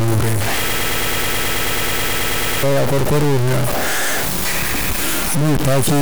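From the start of the speech to its end there is a distortion consistent with a stuck bit. One bit of each sample appears fixed at 0 or 1, likely from a broken data line or converter fault. Roughly half the samples are pushed off by that bit's weight in a pattern that follows the waveform, and because the error flips with the sign of small values, the pauses between phrases carry a constant noise floor rather than silence.

From 0.69 s to 2.63 s the speech turns into a broken-record loop. A fragment about 108 ms long repeats exactly, back to back, 18 times, giving a rapid mechanical stutter at roughly nine cycles per second. This likely comes from the player, encoder or stream stalling and resending the last piece it held. Whatever speech belonged in those two seconds is lost, and normal playback resumes only after the loop ends.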